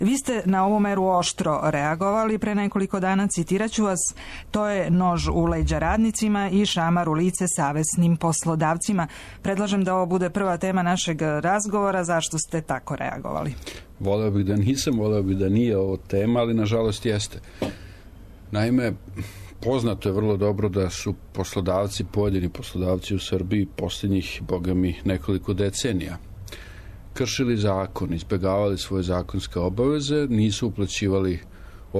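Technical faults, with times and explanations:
Nothing stood out on listening, and no technical problem could be heard anywhere in the audio.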